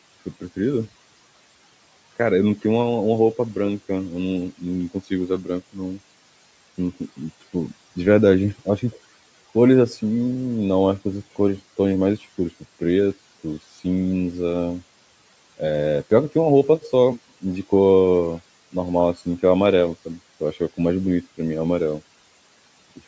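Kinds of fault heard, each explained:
Speech cut by the noise suppressor: between 5.28 and 5.78 s the suppressor misreads part of the speech as background and pulls it down by up to 16 dB. Roughly 150 ms of sound goes faint and swallowed.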